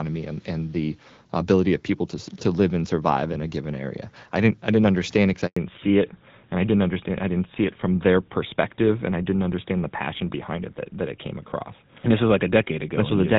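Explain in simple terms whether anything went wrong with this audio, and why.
A handover gap hits at 5.47 s and lasts 100 ms, until 5.57 s. The phone was passing the call from one network to another, and during that switch no sound reached the listener. The audio fades out almost instantly and goes silent for that tenth of a second. Whatever was said in that moment is simply gone and cannot be recovered.

A fallback to narrowband follows immediately, from 5.57 s to the end of the clip. Before the switch the call was carried in HD Voice, which sounds clear with only slight coding roughness. Afterwards it lands on the older GSM phone codec, which can't carry anything above 4 kHz. The crisp upper range disappears, so the speech sounds duller, more muffled and rougher for the rest of the recording.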